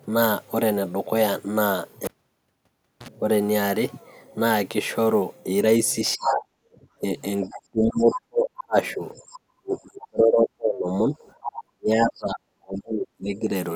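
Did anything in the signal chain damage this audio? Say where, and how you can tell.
Yes. Call processing likely failed during double talk, so speech is suppressed in double talk, dropping up to about 40 dB at 6.16–6.42, 7.0–9.03, 9.53–11.16 and 11.55–13.52 s.

The echo canceller likely left residual echo, so the other side's voice leaks through, about 10 to 25 dB below the speech, at 7.54–7.58, 8.0–8.2, 9.15–9.39 and 11.44–11.55 s.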